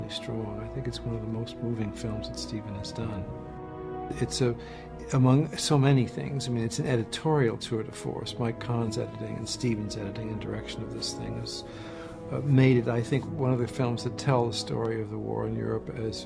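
No technical faults can be heard anywhere in this audio.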